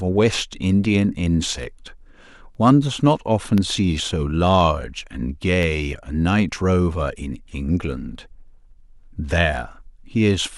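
From 1.53 s to 5.63 s there are periodic USB or driver dropouts. About every 1.02 s, something blocks the audio path. A tiny sliver of speech, well under a millisecond, becomes silence. Each gap is heard as a regular tick, about five in all.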